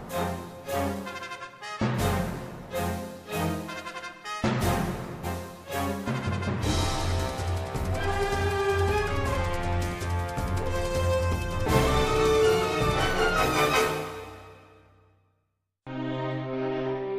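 Compressed frames skipped: the decoder dropped several whole frames at 5.23–5.26 s and 11.17–11.21 s, jumping roughly 200 ms ahead each time, consistent with 46.4 ms frames.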